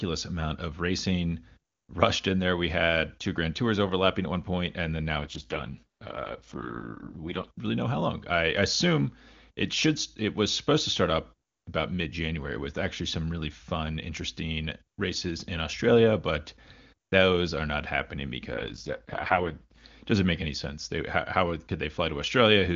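At 5.17 s, after "one point and then", the speech turns rough and raspy until 7.48 s, where "really know how long" follows. This is an AMR rate drop. The link weakened, and the codec was pushed down from its clear top rate, which fits 23.85 kbit/s AMR-WB, to what sounds like 6.6 kbit/s. The band and timing stay intact. The same happens from 18.53 to 19.84 s, between "those are not happening" and "doesn't make any sense".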